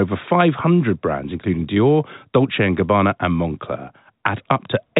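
No faults can be heard in this speech clip. It comes through G.711 telephone coding, so nothing above about 3.8 kHz reaches the ear and the sound has the narrow, boxed-in band of a landline call.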